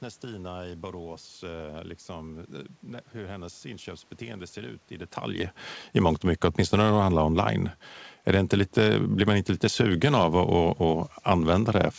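No system faults are audible; the room noise and the level change around 5 s as the talker moves belong to the recording, and the call path's G.722 coding, with nothing above 8 kHz, sounds as that codec should.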